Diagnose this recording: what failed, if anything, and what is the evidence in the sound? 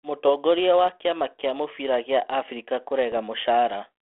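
Bit errors on an ADPCM link damage the audio from 3.12 to 3.19 s, at the transmission stage. The speech is carried by 32 kbit/s G.726 ADPCM within a 300 Hz to 3.5 kHz band. There, a short rough burst with pops and a brief jump in level breaks in. On a spectrogram it appears as vertical broadband smears inside the band. The waveform shows spiky, uneven envelope steps. The pattern points to a few corrupted frames at a low error rate. Each flipped bit throws off the decoder's step size and predictor, so the damage rings on for milliseconds.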